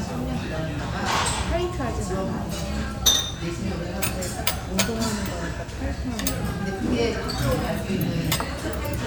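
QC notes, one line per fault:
No technical faults can be heard in this recording of sounds.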